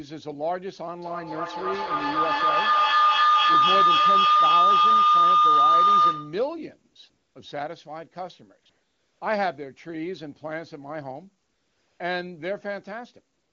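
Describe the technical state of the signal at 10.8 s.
At 10.8 s the speech is intact, with no fault at that moment, and the AMR wideband (HD Voice) coding at 23.85 kbit/s leaves at most faint traces there.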